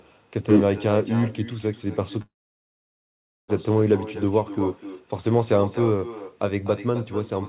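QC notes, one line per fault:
Throughout: echo with no canceller. The far end is playing the call through a loudspeaker, and its microphone feeds that sound back with nothing removing it. Every phrase returns around 300 ms later, at about 14 dB below the direct sound, as a fainter, hollower copy trailing each syllable. Both copies share the same narrow telephone band, with nothing above 4 kHz.
2.22–3.50 s: call audio freeze. The most likely cause is that packets were delayed in transit and the jitter buffer ran dry, leaving the receiver with nothing to play. It briefly stretches the last sound into a short fading buzz or hiss, then goes fully silent for about 1.2 s of the 1.26 s gap. When the packets arrive, the audio resumes from where it stopped, so nothing is lost, but everything after 3.50 s runs about 1.26 s later than it should.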